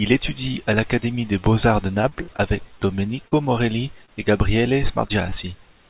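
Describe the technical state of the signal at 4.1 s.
Short concealed packet loss runs from about 4.06 to 4.10 s. Roughly 20 ms of the call arrived too late for the decoder, so the receiver extended the preceding sound for about 22 ms and then crossfaded back into real audio. It is heard as a brief smear or wobble. The spectrogram stays empty above 4 kHz from the G.711 call path.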